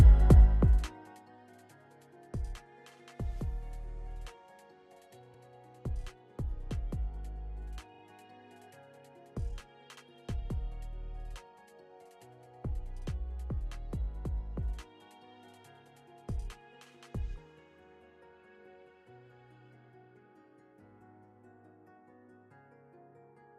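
From 0.37 to 1.27 s there's zipper noise: a level drop of about 20 dB applied in unsmoothed steps, roughly a hundred a second, so a fine ticking buzz rides the fade. Then come three stutters from repeated frames. At 5.33 s an 85 ms chunk plays twice, at 7.94 s a 43 ms chunk plays three times, and at 9.96 s a 64 ms chunk doubles.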